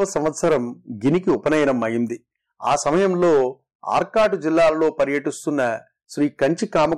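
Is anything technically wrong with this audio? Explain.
Yes. Hard clipping runs throughout: the speech is driven about 10 dB past the limit, so roughly one sample in twenty is flattened.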